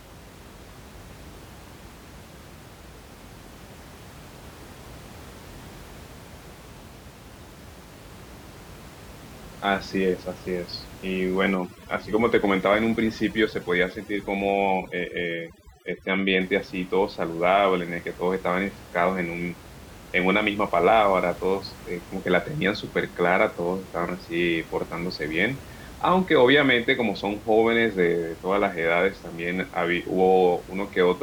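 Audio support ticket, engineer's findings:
Overdone noise removal, 11.55 to 16.41 s: suppressor set too aggressive, gating bands near its noise estimate. Room noise, about 20 dB below speech, drops and breaks up into twinkling specks.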